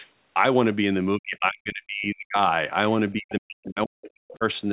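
From 1.18 to 2.37 s and again from 3.12 to 4.44 s, the speech is pulled down hard, by as much as about 40 dB. This is speech suppressed in double talk, likely an echo canceller turning down both this side's talker and the loudspeaker echo. From 4.3 to 4.36 s, the other side's voice leaks through as a faint scrap well below the speech. An echo canceller has likely left some loudspeaker sound in the microphone.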